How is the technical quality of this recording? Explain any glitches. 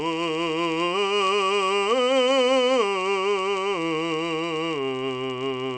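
The technical quality is compromised by one fault that runs the full length of the music: a resampler restarted on every block. The rate conversion, which fits a change from 48 kHz down to 16 kHz, treated each 10 ms block in isolation, so the filter at every block edge worked from missing or wrong neighbouring samples. The resulting edge errors repeat at 100 Hz, which is too fast to hear as separate ticks. Instead they fuse into a low, steady buzz that rides on the music and follows its level.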